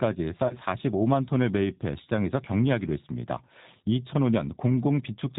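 G.729 codec damage runs through the whole clip. The speech is rebuilt from a vocal tract filter, a pitch predictor and a few pulses per 10 ms frame, which fits an 8 kbit/s G.729A stream. Nothing above 4 kHz survives, so the voice sounds band-limited, rough and plainly synthetic.

VoIP packet loss concealed by the speech codec follows at 0.47 to 0.57 s. About 30 ms of audio went missing, consistent with three lost frames. The decoder extended its last pitch and filter at falling gain, so the voice smears into a brief fading buzz or coloured noise and stays weak while it recovers.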